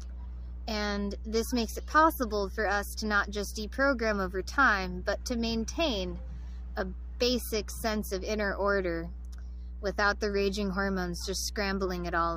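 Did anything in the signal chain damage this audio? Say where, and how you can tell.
Yes. Mains hum enters in the analogue wiring: a steady 60 Hz tone with low harmonics runs the whole clip, roughly 10 dB below the signal. A ground loop or nearby transformer couples the power line in. Unlike rumble or handling noise, its pitch and level never change.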